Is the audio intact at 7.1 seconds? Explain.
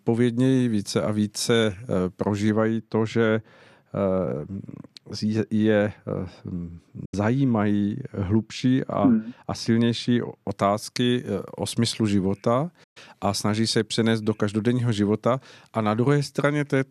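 No. A digital broadcast dropout hits this moment. From 7.05 to 7.14 s the receiver stopped getting usable frames and muted until clean data returned. The output fades to silence over about 8 ms, stays silent, then comes back, leaving a hole of roughly 90 ms in the speech. About 72 ms of what was transmitted is simply gone, which fits the loss of a few consecutive frames, so the sound jumps ahead when it resumes.

The same moment also falls inside a stretch of wrongly applied de-emphasis, running from 2.49 to 10.49 s. A treble-cut stage meant to reverse pre-emphasis was applied either where none existed to undo or a second time. The result is a smooth downward tilt across the upper spectrum, about 14 dB down at 10 kHz relative to 1 kHz. The speech on either side of the gap sounds dull and muffled, with consonant detail softened.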